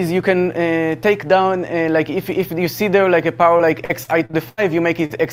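From 3.57 to 4.59 s there's a stretch of repeated packet loss, and it gives the audio that choppy, robotic quality. Audio kept arriving too late or not at all, and each hole was patched by stretching the last bit of sound. About 240 ms got filled in that way, nearly a quarter of the span, and the longest single hole was around 80 ms.

Then at 5.05 to 5.12 s there's a short concealed packet loss. Roughly 40 ms never reached the decoder in time, so the receiver carried the previous sound forward for about 44 ms before blending back in. It comes across as a quick smear or wobble.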